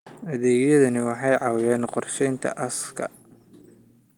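Listening closely to this speech, nothing stood out as a technical fault at any point.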